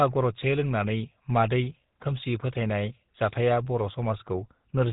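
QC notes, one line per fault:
Throughout, GSM full-rate codec: buzzy, gravelly roughness on the speech with nothing above 3.8 kHz, from pulse-driven vocal-tract coding at about 13 kbps.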